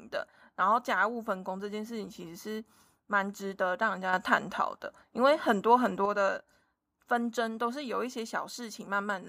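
A sudden gain jump runs from 4.13 to 6.06 s: the speech and the background noise rise together by about 6 dB in a single step, then drop back just as abruptly, likely because a digital gain change was applied instantly rather than ramped.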